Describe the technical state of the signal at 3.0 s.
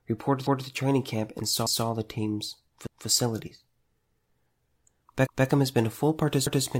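At 3.0 s the signal shows overlapping chunks, from 2.87 to 3.07 s: a new 1.0 s chunk begins 200 ms early, so that segment replays as an audible stutter.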